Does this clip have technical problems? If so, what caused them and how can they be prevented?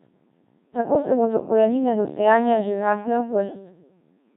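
Yes. The whole speech clip passes through the Codec 2 vocoder. Only pitch, voicing, energy and a coarse spectral envelope survive. The decoder rebuilds the voice from sine waves. The result is heavily robotic and buzzy, which fits a low-rate mode around 1.3 kbit/s. To prevent it, use a higher-rate or waveform-preserving codec where the channel allows.

From 0.93 to 1.02 s, just before "se bodo korenine do", there are bit errors on digital voice radio. The sound jumps in pitch, level and colour and breaks into a warbling bleep. This points to a couple of corrupted frames with a bit error rate of several percent. To prevent it, keep a stronger signal margin or add forward error correction to the link.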